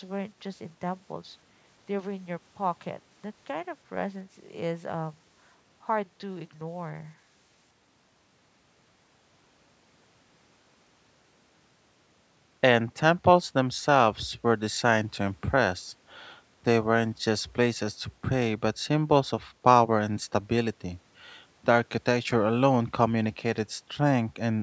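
Nothing's technically wrong with this bit of speech; it has simply come through a call's microphone processing, so the lowest bass is trimmed away and nothing reaches above 8 kHz, which is just how that kind of path sounds.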